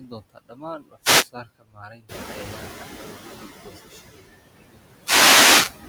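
Throughout the clip, the noise suppressor works frame by frame and pulls down the steady background by about 15 dB. The noise sinks in pauses and swells back under the speech.

At 0.36 to 0.64 s and again at 1.81 to 1.94 s, the suppressor mistakes part of the speech for noise. This is speech cut by the noise suppressor: around a tenth of a second in each span drops by up to about 12 dB and then about 9 dB, leaving those sounds swallowed and faint.

From 2.08 to 3.46 s the noise suppressor is catching up. The room noise jumps by about 17 dB at roughly 2 s, and the suppressor's noise estimate lags for 1.38 s. The louder background comes through with less reduction at first, then settles by about 10 dB just before "goosashada iyo".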